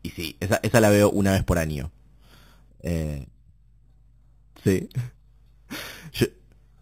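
Throughout the speech there is imaging from sample-and-hold upsampling: each sample was simply repeated to raise the rate, with no smoothing filter, which points to an 8 kHz original brought up to 44.1 kHz. Mirrored copies of the band fill 4 to 8 kHz at about 17 dB below the signal, giving a bright metallic fizz. Unlike steady hiss, it rises and falls with the speech, and its lowest copy moves opposite to the pitch.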